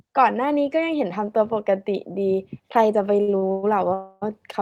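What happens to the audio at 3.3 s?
A short stall from a late packet hits twice, from 3.21 to 3.30 s and again from 3.38 to 3.44 s. Each time the jitter buffer runs dry and the last sound is stretched, for 63 ms and then 42 ms, before carrying on. Unlike a dropout, nothing is lost; the audio just lags later.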